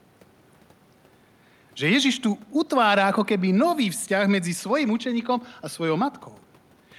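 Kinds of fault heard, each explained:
No technical fault can be heard in this speech recording. Nothing in the audio calls for a fault explanation.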